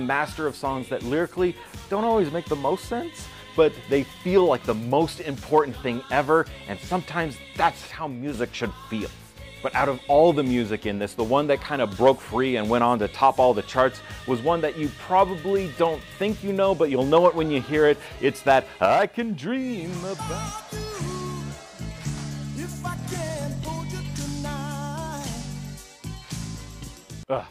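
Sudden gain jumps at 7.92 s (about 7 dB down until 8.34 s) and 18.86 s (about 6 dB down to the end): level and noise floor drop together, likely unramped digital gain changes.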